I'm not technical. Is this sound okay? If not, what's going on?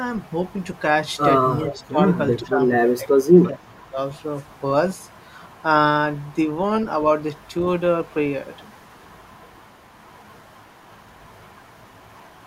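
No. At 1.67 to 1.79 s and 2.39 to 2.48 s, a faint copy of the voice repeats about 0.4 s late. This echo leak likely comes from a loudspeaker echo not fully cancelled.

Speech suppressed in double talk: at 1.67 to 1.99 s, 2.42 to 2.59 s, 2.97 to 3.34 s and 3.5 to 3.98 s, the voice dips. The echo canceller was likely confused by overlapping voices.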